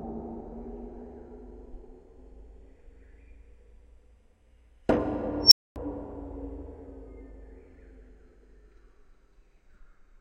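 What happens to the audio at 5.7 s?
At 5.7 s the audio is silent, in the dropout of an unstable filter fault that runs from 5.43 to 5.76 s. A recursive filter with bad coefficients feeds its output back into itself, so a tone around 5 kHz swells to clipping in about 88 ms. The values then overflow and the output cuts out for about 0.25 s until the filter resets. The result is a sharp, rapidly loudening squeal followed by a brief gap.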